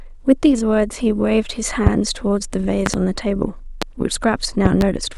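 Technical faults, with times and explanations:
1.87 to 4.84 s, loud pops: four of them, at 1.87–1.90, 2.86–2.97, 3.82–3.85 and 4.66–4.84 s. The second and fourth are double pops. Each one jumps about 20 dB above the speech, which just carries on underneath. That sharp thump is what you get when a sudden voltage step gets into the signal chain and the downstream circuitry smears it into a short pulse. It's likely a plug, switch, static discharge or driver glitch.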